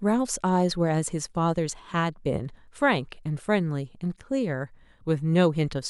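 A short recording of speech, with no technical fault to report. Nothing goes wrong at any point, so there are no times or causes to give.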